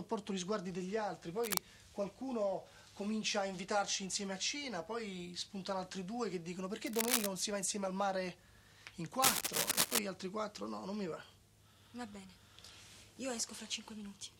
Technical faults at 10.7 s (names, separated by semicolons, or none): none